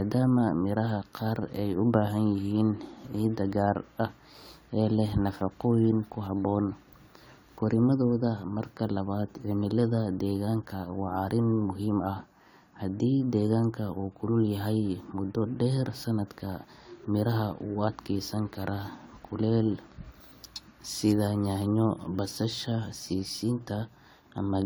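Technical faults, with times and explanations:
Throughout, generation loss: the speech sounds swirly, smeared and hollow, with blurred consonant attacks, more than one encode at a rate fitting 96 kbit/s AAC-LC would give. Likely around seven re-encodes, each requantising on a shifted frame grid, stacking noise and spectral holes.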